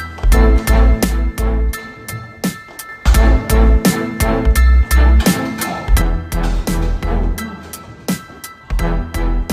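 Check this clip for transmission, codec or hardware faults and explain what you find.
Two problems show up: a clock-related roughness that runs the whole way through, and two stretches where the level sags in a way that points to a lost channel.

Sample clock jitter is present from start to finish. The converter's sampling instants wander by a few microseconds, so each sample lands slightly early or late. Where the waveform is changing fast, that timing slip becomes an amplitude error, sitting around 35 dB below the signal. You hear it as a faint hiss or grit riding on the sound. It gets stronger on loud and bright passages and drops away in the quiet gaps.

Then there are two level drops, from 1.04 to 2.89 s and from 6.02 s to the end of the clip. Each time, the sound abruptly falls by 6 dB and stays down until the stretch ends. That exact halving is the signature of one channel dropping out before the mono sum: material common to both sides loses half its contribution, and anything that lived only in the missing side vanishes completely. 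One stereo channel going dead is the likely cause here.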